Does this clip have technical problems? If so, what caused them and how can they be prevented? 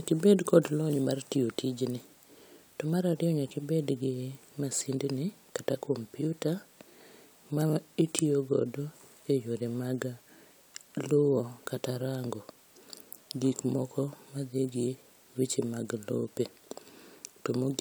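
No, this clip has no technical problems, so there is nothing to prevent.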